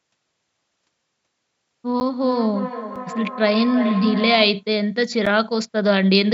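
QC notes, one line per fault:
2.0 s, 2.96 s and 5.26 s: block of digital silence. Three brief holes where the signal drops straight to silence and comes back with no fade. The first and last run about 10 ms and read as ticks or dips. The middle one is under 3 ms, just a tick. Looks like the output buffer wasn't filled in time.
2.18 to 4.69 s: feedback echo between two devices. The sound comes round again roughly a third of a second later, thinner and a bit ringier, peaking at about -8 dB against the speech. A second device in the room is playing the call back into a mic whose canceller can't see that playback.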